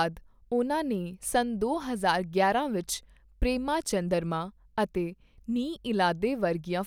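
No technical faults can be heard in this speech recording; the signal stays steady and continuous throughout.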